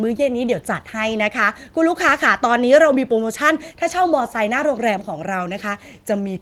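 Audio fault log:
No faults heard.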